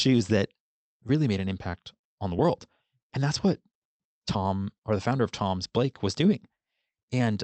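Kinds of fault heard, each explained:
No faults detected; the speech reaches the listener over a normally working Opus call path.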